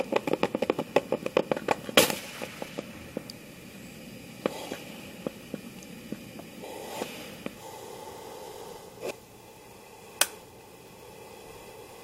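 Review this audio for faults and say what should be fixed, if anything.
Damaged data in a compressed stream at 9.10 s and 11.81 s: corrupted bytes make the decoder misread frames and lose sync, producing brief glitches. Verify stream integrity with checksums and retransmit or re-fetch any damaged frames before decoding.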